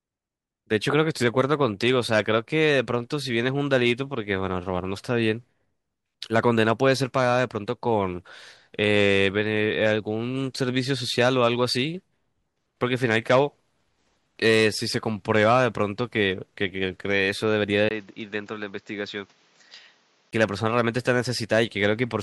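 At 17.89 s a 20 ms gap opens, then the speech runs duller and a little quieter, with nothing above 7.5 kHz and a new, faint noise floor, until 20.33 s. Likely an input switched to a poorer device; the changed background noise separates it from plain filtering.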